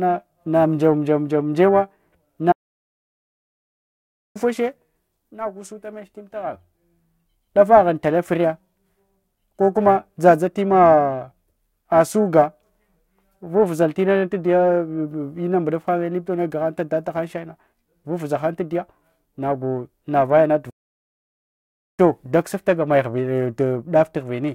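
Periodic clock jitter runs through the whole clip. Interference is wobbling the converter's clock at about 1 kHz. Each part of the speech gains sidebands at that spacing, strongest in the higher frequencies. The voice has a rough, metallic edge that disappears in the pauses.

A playback stall hits at 2.51 s. The speech cuts off mid-flow and the output stays silent for 1.83 s, until 4.37 s. A second stall runs from 20.70 s to 22.00 s, lasting 1.28 s. The likely cause is the player running short of data, or its thread being blocked, until it recovered.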